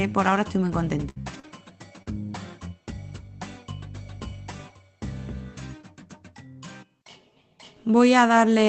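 Things go wrong from 1.09 to 1.18 s with a burst of packet loss. About 60 ms never arrived, so the receiver stretched the last sound and faded it into a held buzz or hiss before jumping ahead.

Right after, short concealed packet loss hits at 1.22 to 1.28 s, again at 1.40 to 1.45 s, and at 2.02 to 2.08 s. Each is a 40 ms hole patched by continuing the previous sound, heard as a quick smear or wobble.

There are also lost packets rebuilt from error correction at 1.34 to 1.36 s, 1.43 to 1.45 s and 2.28 to 2.30 s. Each 20 ms frame was played from the low-bitrate backup copy in the next packet, so there's no gap, just a rougher, noisier blip. All of this rides on an Opus call path whose audio stops at 8 kHz, which fits a bitrate around 24 kbps.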